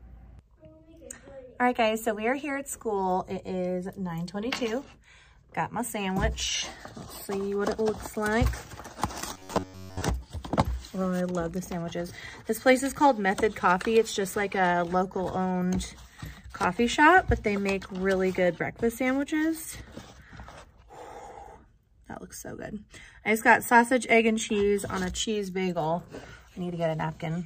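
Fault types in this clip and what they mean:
Robotic sound from repeated short buffers: from 9.33 to 10.02 s the sound turns into a rigid metallic buzz at 93.8 Hz, likely from a block about 10.7 ms long being replayed most of the time. A spectrogram shows evenly spaced harmonic lines, and the waveform shows identical repeating cycles.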